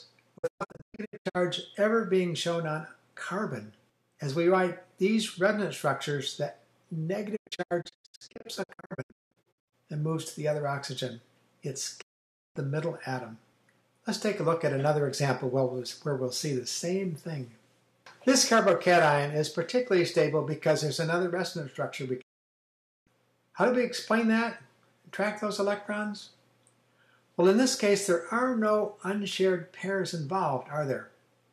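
Digital broadcast dropouts cut the sound at 0.37–1.37 s, 7.35–9.74 s, 12.01–12.57 s and 22.21–23.09 s, as the receiver mutes on failed frames. Each gap has a brief 20 ms fade. The first two break into scattered holes of up to 192 ms. Unlike packet-loss concealment, nothing is patched over, and the missing material is simply gone.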